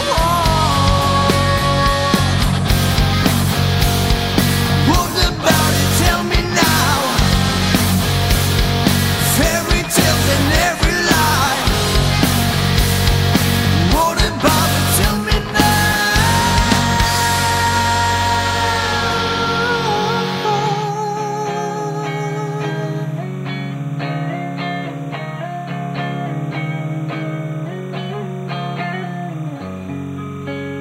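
Linear timecode at 30 frames per second leaks from a neighbouring line, adding a steady chirping warble near 1 and 2 kHz, roughly 30 dB below the audio, throughout: timecode bleed.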